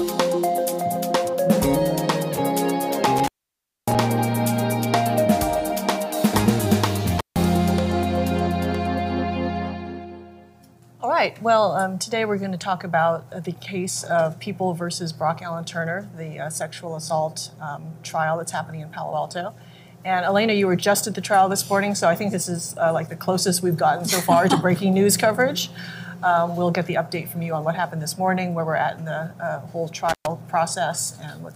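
Intermittent contact breaks the sound three times: at 3.18 to 3.95 s, 7.18 to 7.36 s, and 30.09 to 30.27 s. A loose plug or cable opens briefly. Audio drops out with crackle at each edge. Faint hiss fills the gaps, the first lasting about 0.6 s.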